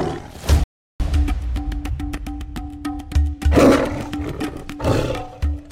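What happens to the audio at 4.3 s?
Nothing goes wrong at 4.3 s; the audio plays through that moment intact, with no dropout, click or distortion.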